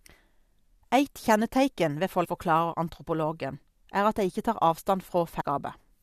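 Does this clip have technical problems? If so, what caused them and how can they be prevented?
Yes. Two brief bursts of damaged data in the compressed stream occur at 2.24–2.26 s and 5.40–5.42 s, each about 20 ms long, where corrupted bytes made the decoder misread frames and lose sync until it found the next valid header. Prevent this by transmitting and storing the stream with checksums or error correction and verifying file integrity.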